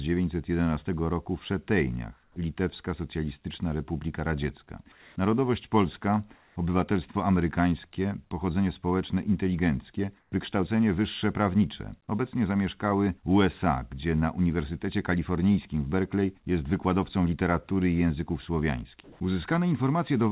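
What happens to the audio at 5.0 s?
Comfort noise replaces the background from 4.92 to 5.16 s. For those 240 ms the real ambience gives way to a steady, featureless hiss about 2 dB quieter. Likely the sender stopped transmitting during this pause in speech, leaving the receiver to synthesize shaped noise instead.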